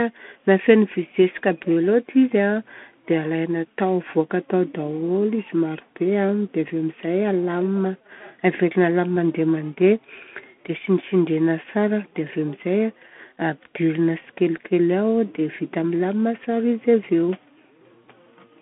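From start to end, the speech carries the sound of a Bluetooth CVSD headset codec. Each sample is coded as one up-or-down step, which fits a 64 kbps link. Nothing passes above 3.8 kHz. The band sits near 150 Hz to 3.4 kHz. The damage is plainly audible: scratchy s sounds and a granular hiss.

At 9.16 s comes a phantom power thump, lasting until 9.34 s. A supply switched on a live input sent a voltage step through the coupling capacitors. It lands as a deep thud that dies away in about 40 ms.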